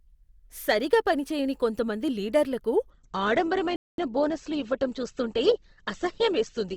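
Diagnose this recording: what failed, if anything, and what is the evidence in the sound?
At the network and playback stage, an adaptive stream at a lower bitrate takes over at 2.9 s and runs to the end. Codec artefacts rise, and the change in quality is abrupt, with no gap. That fits Opus dropping from 64 to 16 kbit/s.

A playback stall silences the output from 3.76 to 3.98 s, about 222 ms, cutting the speech mid-flow before it resumes. The waveform shows a flat, silent gap with hard edges. The likely cause is the player's buffer running dry, or its thread being blocked, at the playback stage.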